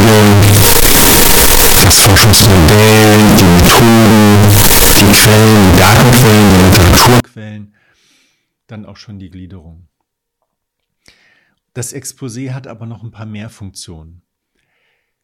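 From 0.0 to 7.2 s the speech is blasted into a harsh, square-edged roar, with background noise as loud as the talker, though pitch stays traceable: float read as integer, likely 32-bit float samples decoded as 32-bit integers. The waveform sits as a near-square block at a nearly fixed, high level, and the spectrogram fills with dense broadband energy.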